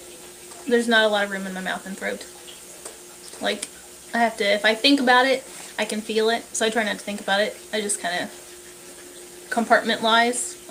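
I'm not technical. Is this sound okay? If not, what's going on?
Yes, this sound is okay, and there's nothing going on with it that needs fixing.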